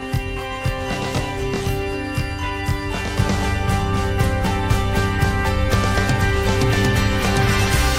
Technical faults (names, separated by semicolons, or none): channel delay (comb filtering)